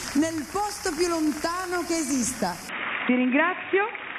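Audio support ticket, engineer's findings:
Input switched to a poorer device, 2.69 s to end. Sound turns dull and boxy abruptly, no gap at switch. Nothing above 3.8 kHz afterwards; level shifts about 5 dB; new low background noise appears well below the signal. Likely cause: capture moved to a narrowband headset or secondary microphone mid-recording, whose own band limit, gain and noise floor take over.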